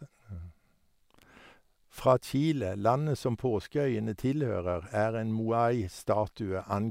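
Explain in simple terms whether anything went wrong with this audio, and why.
Nothing went wrong here: the speech has no audible dropouts, glitches, distortion or other technical faults anywhere in the recording.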